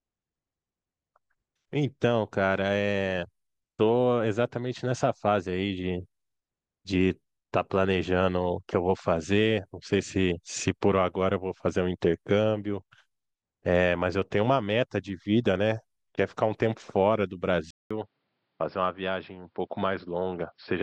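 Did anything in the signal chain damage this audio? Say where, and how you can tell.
Yes. From 17.71 s to the end, the speech turns dull and boxy after a 0.2 s gap, with nothing above 5.4 kHz, a level drop of about 5 dB and new background noise about 45 dB down. The likely cause is an input switched to a poorer device at the driver stage.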